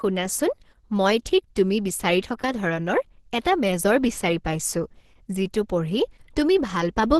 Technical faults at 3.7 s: Opus compression

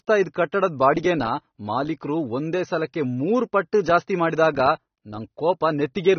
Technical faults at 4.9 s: transcoding between lossy codecs

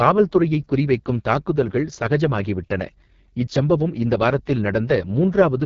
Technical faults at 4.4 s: AMR wideband (HD Voice) codec

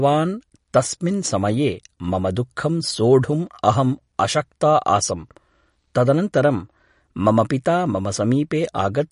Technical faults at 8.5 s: MP3 compression

